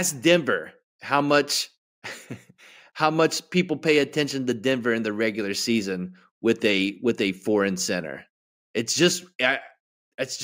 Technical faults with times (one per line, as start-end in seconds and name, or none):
0.00-10.43 imaging from linear upsampling